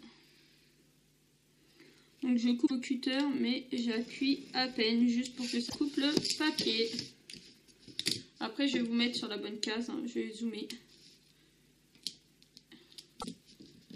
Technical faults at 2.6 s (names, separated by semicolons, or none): damaged data in a compressed stream